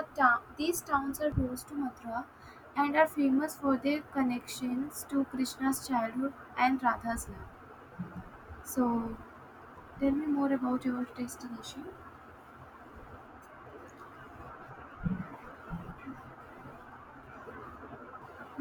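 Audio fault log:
1.32 s and 18.22 s, damaged data in a compressed stream: A brief blip sounds between "town these towns are" and "close to", then again near the end. Corrupted bytes there make the decoder misread frames and lose sync. It then hunts for the next valid frame header.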